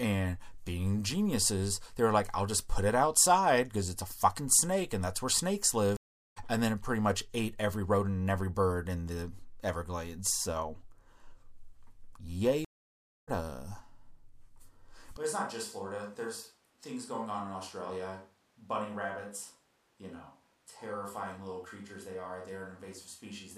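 At 5.97 s a stream reconnect occurs. The connection drops and the sound stops for about 0.39 s. A fresh decoder then starts mid-stream. The speech resumes roughly a third of a second later, so that stretch is lost. At 12.65 s a second reconnect follows. The silence lasts 0.62 s, and the speech picks up roughly half a second further on.

At 15.17 s the sound turns roomy and hollow at once, with thinner bass. The level falls by about 10 dB. Room noise sits about 35 dB below the speech. This lasts to the end, likely a switch to a distant microphone.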